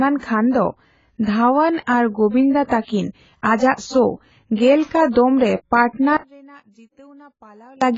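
From start to finish the speech sounds dull and smeared, with a warbling, fizzy texture on sustained sounds and sibilants, and there is nothing above 7.6 kHz. This is heavy damage from AAC compression, likely AAC-LC at a low bitrate, which fits around 16 kbps. With so few bits, the codec lowers its cut-off and quantises the remaining frequency lines coarsely, leaving gaps in the spectrum or filling bands with substitute noise.

At 4.85 to 4.91 s, between "ᱥᱳ ᱜᱮᱞ" and "ᱠᱟ ᱫᱚᱢᱼᱨᱮ", a short hiss of about 55 ms runs ahead of an attack, which then sounds soft. The same happens at 5.89 to 5.93 s, just after "ᱥᱳ ᱜᱮᱞ ᱠᱟ ᱫᱚᱢᱼᱨᱮ", this time over about 46 ms. This is pre-echo. The transform codec spreads its quantisation noise across a whole block, so noise sized for a loud onset late in the block also fills the quiet moment before it.

From 6.17 to 7.82 s the sound drops by about 28 dB, background included, leaving only a faint residue. 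The likely cause is one channel inverted. With one stereo channel's polarity reversed, whatever the two channels share cancels when they are summed to mono, and only the small difference between them remains audible.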